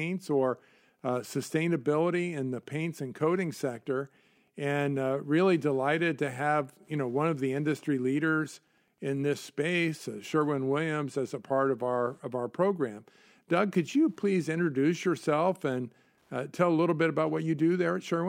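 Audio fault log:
Throughout, Wi-Fi interference: the audio circuit rectifies a nearby radio's beacon every 102.4 ms, giving a faint ticking ten times a second, roughly 45 dB below the speech.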